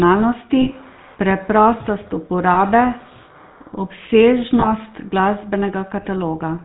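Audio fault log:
Throughout: GSM full-rate codec. The speech carries plainly audible buzzy, gravelly roughness, with nothing passing above 4 kHz. The codec rebuilds the vocal tract from a sparse pulse excitation, which fits a 13 kbps full-rate stream, so fine detail is replaced by a coarse, rasping texture.
0.62–0.70 s, 2.54–2.57 s, 4.60–4.67 s: lost GSM frames. Each gap shows a brief rough, metallic ring where the decoder repeated the last good frame. The losses are short, about 40 ms at the first and 20 ms at the others, which fits two frames and one frame dropped, so none fades fully to silence.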